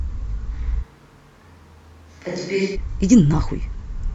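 At 0.84 s the speech turns suddenly roomy and hollow, losing bass and dropping about 5 dB. Background noise rises to about 30 dB below the speech. This is likely a switch to a distant microphone. The close sound returns abruptly at 2.74 s.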